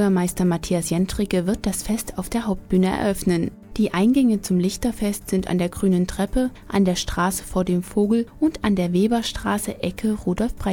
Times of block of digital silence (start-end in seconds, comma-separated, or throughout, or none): none